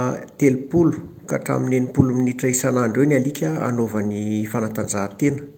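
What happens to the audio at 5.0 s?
Nothing goes wrong at 5.0 s; the speech continues intact through that moment with no dropout, click or other audible fault.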